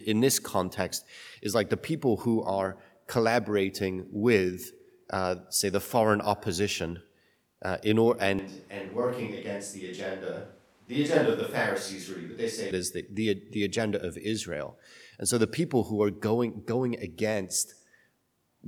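A switch to a distant microphone runs from 8.39 s to 12.71 s. The speech abruptly turns roomy and hollow, with thinner bass and a level roughly 5 dB lower, while background room noise rises to around 35 dB below the speech. The likely cause is that the close microphone's signal dropped out or went unused, leaving a more remote pickup such as a camera microphone. At 12.71 s the close, fuller sound returns just as suddenly.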